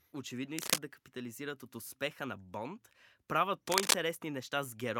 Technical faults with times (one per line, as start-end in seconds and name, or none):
0.58-0.78 cable scratch noise
3.67-3.95 cable scratch noise